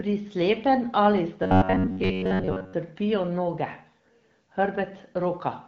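Speech, with robotic sound from repeated short buffers from 1.43 to 2.74 s: a rigid metallic buzz at about 94 Hz, likely from replaying roughly 10.7 ms fragments over most of that stretch, whose fixed pitch sets it apart from codec roughness.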